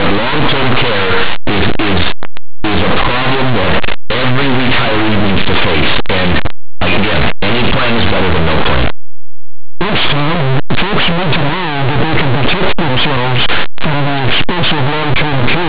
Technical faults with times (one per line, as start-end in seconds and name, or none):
0.00-15.68 linear audio read as companded